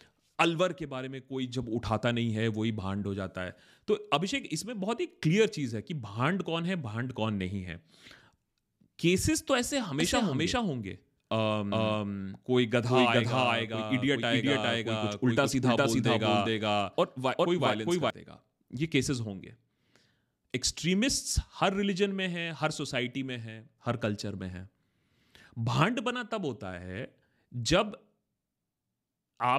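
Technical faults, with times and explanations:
10.00–18.10 s doubled audio track: an equally loud copy trails about 0.4 s behind, likely a slower duplicate path; waveform onsets repeat, appearing and vanishing abruptly.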